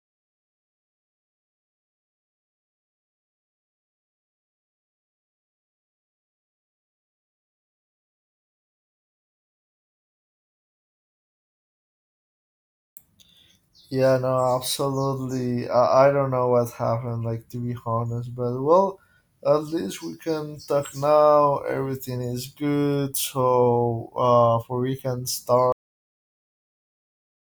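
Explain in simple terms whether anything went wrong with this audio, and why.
Something went wrong at the end. It has a cut-off end. Right after "for we can", at 25.72 s, the speech stops mid-sound. Silence follows, because the final stretch was never recorded.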